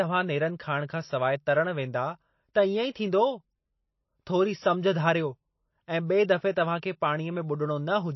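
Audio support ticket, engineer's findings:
Throughout: plainly audible codec damage on the speech, watery and swirly texture, no content above 5.8 kHz. Likely MP3 compression. Bit-starved encoder zeroing weak frequency lines frame to frame and cutting treble, which fits a bitrate near 25 kbps.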